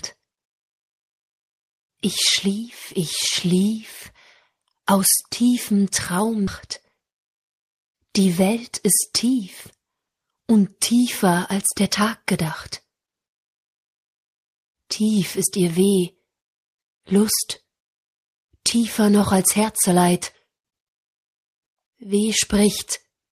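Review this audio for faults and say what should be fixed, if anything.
There's a skip ahead at about 6.47 to 6.49 s: roughly 0.7 s of audio goes missing and playback jumps straight to later material with no gap, so the two sides butt together. That chunk was dropped either in transit or by an overflowing jitter buffer while newer audio was already queued. To prevent it, give the jitter buffer more headroom and fix the network loss so late audio doesn't get thrown away.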